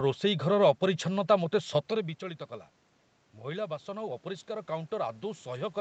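From 3.35 s to the end at 5.81 s there is automatic gain rising. After the input falls by about 13 dB, the gain control gradually pushes the level back up, so speech and room noise swell together. A talker moving closer would lift the voice alone.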